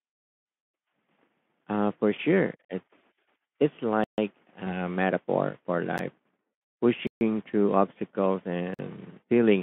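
At 2.65 s, 4.04 s, 5.98 s, 7.07 s and 8.74 s the speech drops into blocks of digital silence lasting about 46 ms, 139 ms, 12 ms, 139 ms and 46 ms. Output buffers likely went unfilled, and the 46 ms holes fit a 2048-sample buffer. The shortest sounds like a tick, and the longer ones sound like gaps.

From 4.65 to 4.77 s, VoIP packet loss concealed by the speech codec shows up as a stretched, fading smear. The Speex decoder covered one lost 20 ms frame by extrapolating, and the voice stays weak or distorted for tens of milliseconds after it.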